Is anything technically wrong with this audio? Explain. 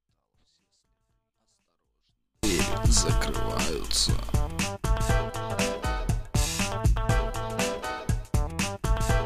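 Yes. A 24-bit alignment error (too quiet) runs from 0.0 to 2.43 s. Samples held in the low three bytes of a 32-bit word are being interpreted as full 32-bit values, shrinking them by about 48 dB, so the opening sound stays clean but nearly disappears.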